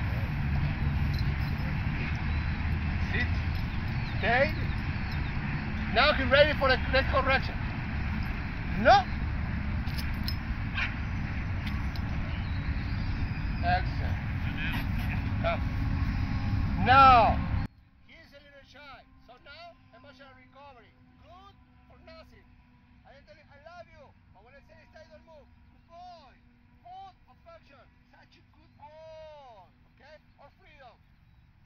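From 17.66 s to the end at 31.65 s, the audio drops by about 29 dB and turns faint, likely one channel inverted, cancelling on mono summing.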